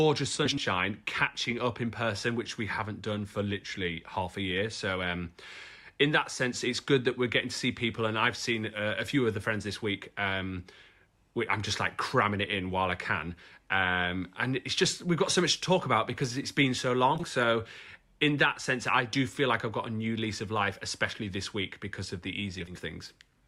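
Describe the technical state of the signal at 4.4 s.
At 4.4 s the speech signal is intact, with no audible fault at that moment.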